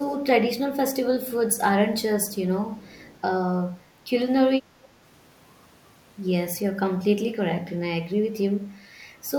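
At 0.0 to 0.18 s and again at 0.66 to 0.76 s the speech is pulled down sharply, by about 25 dB in the first dip and about 20 dB in the second, so the speech thins out and nearly vanishes for a moment. This is speech suppressed in double talk. The likely cause is an echo canceller that could not separate this side's own talk from the far end's sound playing over its loudspeaker, and attenuated everything.

Between 2.3 and 2.35 s, and then from 2.71 to 3.16 s, a faint second copy of the speech trails the original by 313 ms. It sits about 30 dB below the direct signal, heard first as a brief scrap and then as a longer shadow. This is echo leak. It likely comes from a loudspeaker-side echo canceller that failed to fully remove what its microphone picked up and sent the remainder back down the line.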